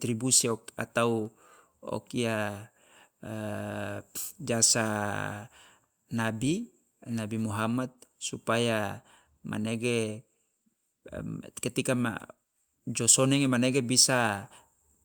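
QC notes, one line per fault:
No faults found in this clip.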